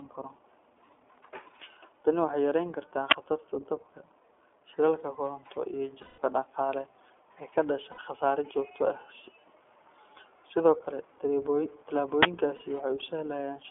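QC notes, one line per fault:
Throughout: iLBC codec. The audio is confined to a telephone band of roughly 300 Hz to 3.4 kHz, so everything above that is missing and the speech sounds thin and boxed-in. The coding damage is plainly audible as a rough, slightly synthetic texture. The character fits the 15.2 kbps mode with 20 ms frames. The codec models each frame's excitation on its own, and that coarse excitation model produces the roughness.
3.11 s and 12.23–12.25 s: uninitialised buffer. Each event is a brief, loud blast of harsh digital noise that has nothing to do with the surrounding speech. The first lasts about 12 ms and the second about 23 ms. These lengths suggest a 512-sample block and a 1024-sample block respectively. In each case the playback path output a block before any audio had been written into it, so stale memory contents were played as samples.
6.02–6.20 s, 7.92–8.00 s and 12.56–12.62 s: lost iLBC frames. 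The gaps last 160 ms, 60 ms and 40 ms, which fits runs of 20 ms frames going missing. The first gap ends just before "dhaqaale ee ka dhasha", and the second sits between "dhaqaale ee ka dhasha" and "khasaare joogto". Each gap is filled by the decoder's concealment. It repeats the last pitch cycle mixed with noise, which is heard as a held, buzzy vowel. On the longest gap that fill fades. Normal speech returns almost immediately after each gap because the next frame decodes independently.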